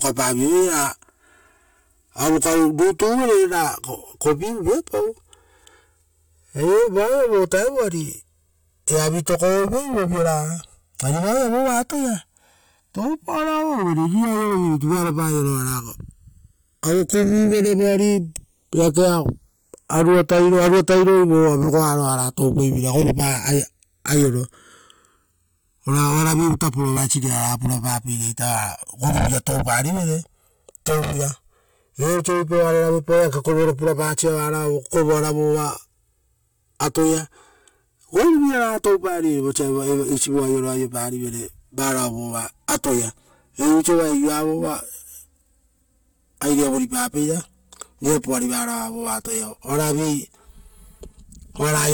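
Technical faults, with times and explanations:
throughout: channels drifting apart. The two channels run on clocks that disagree by roughly 150 ppm, so the inter-channel delay grows steadily to around 5 ms by the end. Summed to mono, comb-filter notches sweep slowly through the speech spectrum, producing a gradual flanging.
26.96–26.98 s: damaged data in a compressed stream. A short stretch of the encoded stream is corrupt, so the decoder misreads those frames and loses sync before locking onto the next valid frame header. The result is a brief glitch in the speech.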